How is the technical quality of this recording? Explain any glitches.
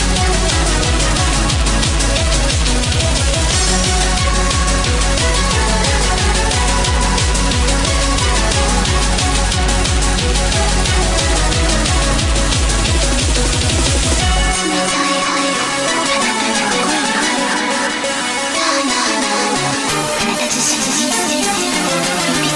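The recording has one fault, confined to its final stretch.

From 19.89 s to the end at 22.55 s, a wrong sample rate makes the sound run about 1.09 times fast and sit about 1.5 semitones sharp, which fits 22 kHz material played at 24 kHz without conversion. On a spectrogram, harmonics shift upward and events compress in time; the waveform looks squeezed horizontally.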